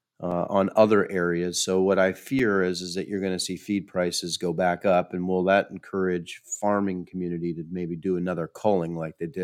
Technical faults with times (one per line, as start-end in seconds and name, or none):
0.31 block of digital silence
2.39 block of digital silence